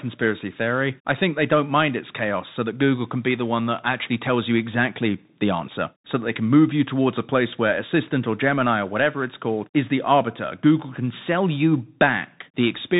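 Speech passes through a Bluetooth CVSD headset codec throughout: nothing above 3.8 kHz survives, and a granular hiss and scratchy sibilants, unlike a clean low-pass filter's, fit a 64 kbit/s CVSD link.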